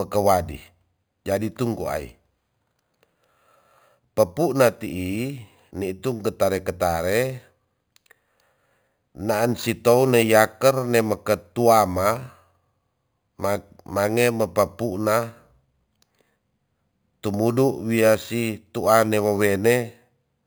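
A bright metallic fizz rides on the speech throughout the clip. It is imaging from sample-and-hold upsampling. The rate was raised by simply holding each sample, with no smoothing filter. That leaves mirror copies of the speech spectrum. The lowest copy sits between about 5.5 and 11 kHz, roughly 19 dB below the speech. It rises and falls with the speech level. Its position fits an original rate near 11 kHz, raised to 44.1 kHz.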